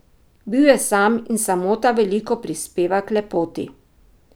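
No technical faults can be heard anywhere in the speech recording; the signal stays steady and intact throughout.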